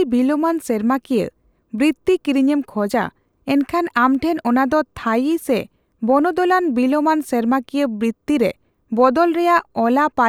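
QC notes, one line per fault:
Nothing to flag here; no faults turned up anywhere in this one.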